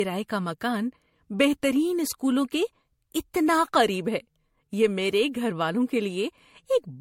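Generation loss runs through the whole speech clip, from start to end. The sound is swirly and hollow, consonant attacks are smeared, and nothing is heard above 16.5 kHz. The damage is heavier than a single low-rate encode would leave, which points to MP3 at around 65 kbit/s, likely decoded and re-encoded about four times. Each pass requantised on a shifted frame grid, so noise and spectral gaps piled up.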